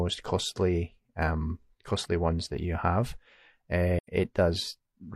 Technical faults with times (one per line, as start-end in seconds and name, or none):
3.99-4.08 AAC frame loss with muting